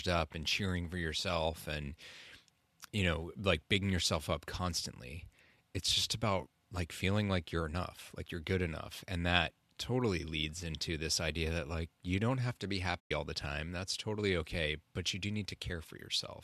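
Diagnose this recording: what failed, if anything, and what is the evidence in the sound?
The failure is AAC frame loss with muting, at the network and codec stage. Between about 13.00 and 13.11 s, right after "don't have to be" and before "all the time", the sound fades to silence and fades back in over roughly 110 ms. The decoder, likely a low-delay AAC one, zeroed the missing frames' spectrum, and the overlapping windows smoothed the edges. A spectrogram shows a clean vertical gap with tapered borders, and the waveform shows the envelope dropping to zero.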